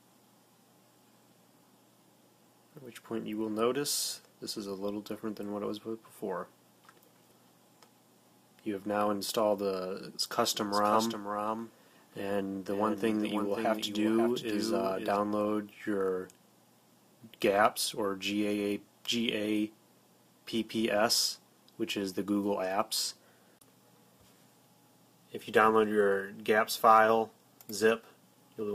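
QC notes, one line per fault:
10.55–15.17 s, doubled audio track: a second full-band copy of the sound runs about half a second behind the original and roughly 5 dB quieter, switching in and out abruptly at both ends. Unlike echo or reverb, there is just one repeat, with no decay, no room colour and no further reflections. The likely cause is the same signal arriving again through a slower path, or an edit leaving two copies out of step.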